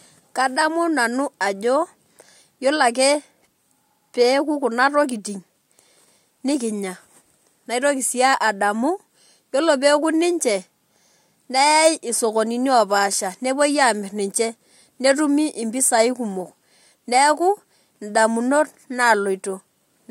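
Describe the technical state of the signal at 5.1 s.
At 5.1 s the speech signal is intact, with no fault audible at that moment.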